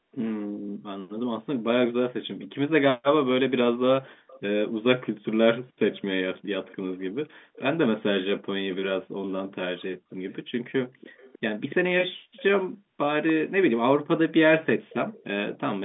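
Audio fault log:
3.26–4.4 s, 5.93–7.61 s, 9.81–13.33 s, 14.9–15.58 s: echo leak. A far-end echo canceller likely passed loudspeaker pickup back, so a faint copy trails the speech by 290 ms, about 20–25 dB down.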